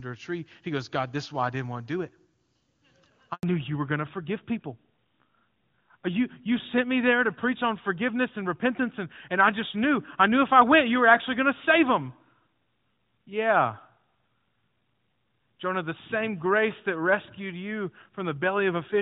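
At 3.33 s the speech drops to silence for 100 ms, until 3.43 s. This is a handover gap, where no speech frames arrived while the call switched networks. From 3.43 s to the end the voice sounds duller and rougher, with nothing above 4 kHz. This is a fallback to narrowband, which fits a move from the clear AMR wideband (HD Voice) codec down to narrowband AMR.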